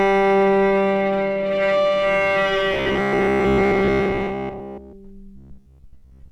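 From 2.74 to 4.94 s and again from 5.36 s to the end, robotic sound from repeated short buffers appears: audio likely arrived too seldom, so roughly 15 ms chunks were looped in place of most of the real signal, leaving a rigid, metallic buzz at about 67 Hz.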